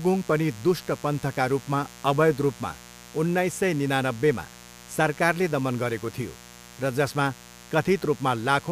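Speech with mains buzz throughout: sharp switching spikes from 60 Hz mains leak in, adding a steady raspy buzz of harmonics reaching several kHz, roughly 20 dB below the voice.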